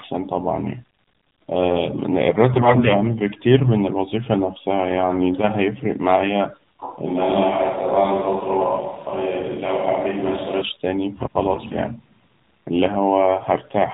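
The whole clip passes through the AMR narrowband mobile codec. Nothing above 4 kHz survives, so the speech sounds thin and boxed in. The voice is plainly buzzy and somewhat synthetic. That fits a low 7.4 kbps mode.

AMR bit errors strike from 2.54 to 2.92 s, then from 11.54 to 11.75 s. Flipped bits put the voice model's driving pulses in the wrong places. Pitch and level roughly hold. The speech turns hoarse, scratchy and gargly. The first burst sounds rougher.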